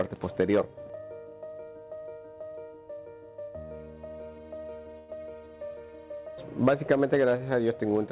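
From 4.98 to 5.10 s, a call audio freeze stretches the last sound into a fading buzz or hiss, likely from a jitter buffer running empty. On a spectrogram this shows as flat, smeared bands under the 4 kHz ceiling, before the sound resumes with nothing lost.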